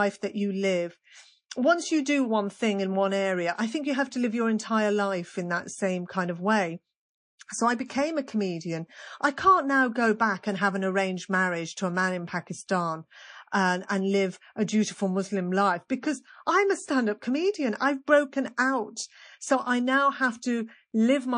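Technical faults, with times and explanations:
throughout, MP3 compression: watery, swirly speech with dulled treble and smeared attacks, likely from heavy MP3 encoding at a rate that fits about 40 kbps.
7.87 to 7.90 s, pre-echo: a 30 ms hiss, about 10 dB up, precedes a sharp attack, because quantisation noise spreads across what sounds like a long block.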